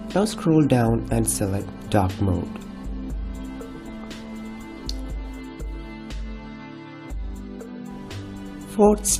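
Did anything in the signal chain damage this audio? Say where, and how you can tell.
No, no signal-chain damage heard.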